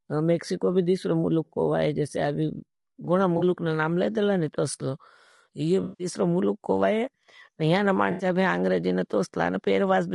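Throughout the clip the speech sounds rough and grainy, with a noisy haze between the pitch harmonics and a thin, somewhat synthetic top end. This is plainly audible codec damage, likely from low-delay AAC compression (AAC-ELD). Its short frames resolve the harmonics of the speech poorly, and the grain fits a bitrate around 32 kbps, too little for such short frames to carry the detail cleanly.

Three smeared, noisy patches interrupt the speech, each a case of AAC frame loss with concealment. In each one the decoder has lost audio frames and rebuilt the gap from the last good spectrum. The first runs from 3.37 to 3.43 s, about 40 ms, between "वाई जैसे अभी गुणा" and "नाम ले देला ने", and is a brief phasey blur. The longest runs from 5.83 to 6.07 s, about 160 ms, after "देला ने तोसलो ये" and before "मुलुक को वाई यहना". Here the invented spectrum is stretched long enough to sound like a hissy, washed-out smear. 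The third runs from 8.11 to 8.25 s, about 80 ms, ending just before "भी आंग्रेजी न", and is a shorter noisy patch.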